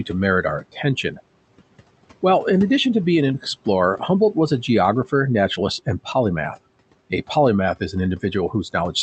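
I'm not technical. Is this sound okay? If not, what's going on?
No. Between 0.61 and 1.19 s the noise suppressor mistook some speech for background and turned it down, so about a fifth of a second sounds swallowed and faint.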